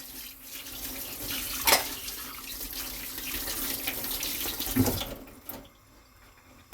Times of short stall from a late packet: none

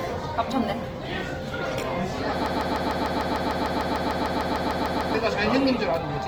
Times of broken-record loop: 2.46-5.14

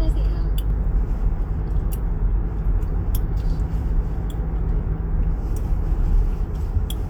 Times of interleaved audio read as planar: none

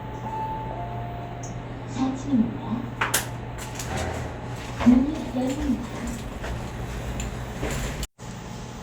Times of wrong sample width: none

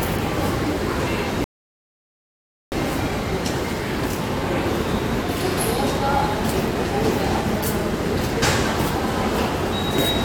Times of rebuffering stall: 1.44-2.72

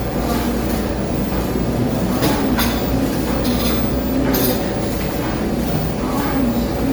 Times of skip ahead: none

